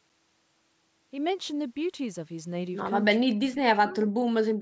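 Speech suppressed in double talk hits this speech recording from 3.2 to 3.39 s and again from 3.68 s to the end, with dips of roughly 30 and then 40 dB, likely an echo canceller ducking the talker while the far side spoke. Echo leak appears at 3.55 to 3.59 s and 4.02 to 4.07 s as faint copies delayed 415 ms, about 25 and 20 dB below the speech, likely where loudspeaker sound slipped past cancellation.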